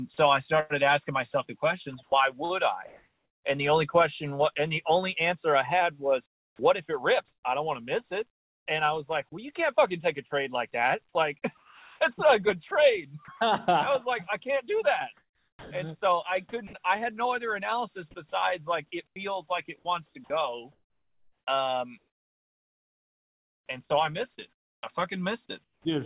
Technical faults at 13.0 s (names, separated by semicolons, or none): sound chopped by the voice detector